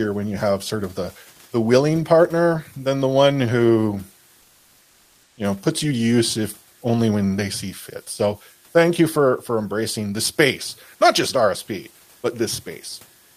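Speech with faint converter idle tones throughout: a thin whistle around 1.5 kHz, roughly 36 dB below the speech, from an undithered delta-sigma converter cycling through repeating bit patterns at low input. On a spectrogram it shows as a steady narrow horizontal line that stands out most in pauses. Between "than the one who" and "know puts you to", from 4.41 to 5.37 s, the room noise (about 38 dB under the speech) gives way to comfort noise in place of the background. This is a smooth, featureless hiss about 2 dB quieter, likely because discontinuous transmission stopped sending audio and the receiver filled the gap with synthetic noise. The spectrogram shows an evenly textured band there, and the waveform shows a slightly lower, uniform noise floor.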